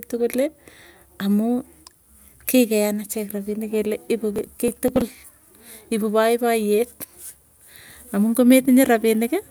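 Processor overload crackle runs from 4.36 to 5.08 s. The processor falls behind and misses around ten deadlines for buffers only a few milliseconds long. Each missed buffer is skipped, leaving a hard-edged gap, so the speech takes on a gritty crackle that stops once the load eases.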